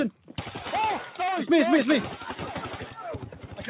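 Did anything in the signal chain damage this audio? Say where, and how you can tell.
Yes, at the call-processing stage: a noise suppressor built for speech stayed on for this non-speech material. Across the clip, level swings by something like 10 dB as held parts and tails sink and attacks survive, giving a pumping, thinned-out sound. The band also stops at 4 kHz, which fits G.711 mu-law at 64 kbps.

Two spots show the sound cut by the noise suppressor most clearly: 0.11 to 0.38 s, dropping about 10 dB, and 3.25 to 3.59 s, dropping about 9 dB. In both, steady or decaying sound gets treated as noise and pulled down harder than the surrounding material.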